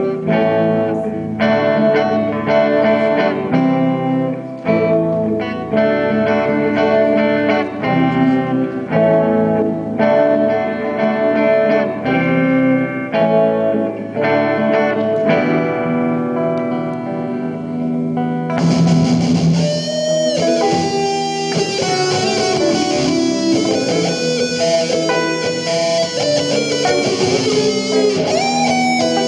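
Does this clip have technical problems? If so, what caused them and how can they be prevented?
No, this clip has no technical problems, so there is nothing that caused them and nothing to prevent.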